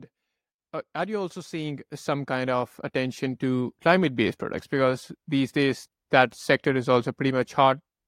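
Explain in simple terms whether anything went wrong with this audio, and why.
Between about 1.05 and 3.82 seconds, the speech slowly gets louder, and the background noise swells right along with it, as if someone were turning up a volume knob over nearly three seconds. This is automatic gain rising: the recording device judged the incoming sound too quiet and gradually raised its own amplification. Because it boosts everything it hears, the room noise climbs at the same pace as the speech.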